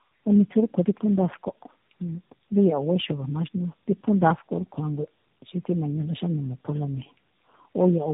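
Speech, and it's got tandem speech coding throughout: it sounds like three low-rate speech codecs stacked in a row, each re-coding the last one's mess, so it's rough, warbly, and nothing above 3.8 kHz.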